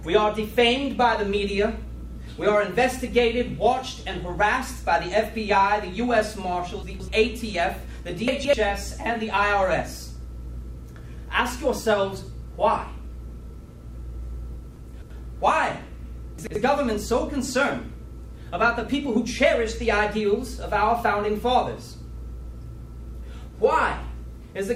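Chunks out of order at 6.83–7.08, 8.28–8.53, 14.76–15.10 and 16.38–16.56 s: 85 ms blocks play one to three chunks late, causing jumbled moments.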